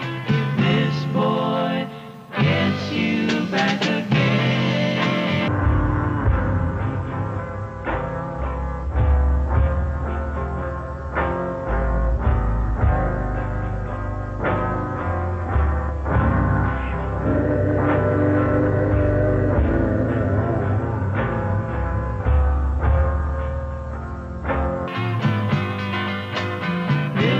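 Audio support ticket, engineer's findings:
Section at the wrong speed, 5.48–24.88 s: audio runs at half speed, pitch roughly ten semitones lower. Likely playback or editor clock mismatch. Unlike a pure pitch shift, durations stretch along with pitch, so everything sounds both slow and deep.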